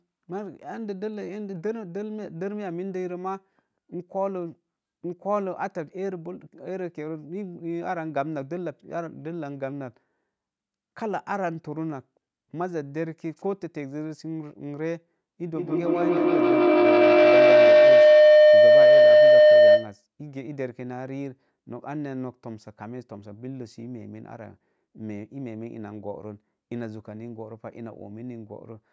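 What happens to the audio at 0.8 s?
Nothing goes wrong at 0.8 s; the speech there comes through intact, with only the usual band-limiting of a call microphone path.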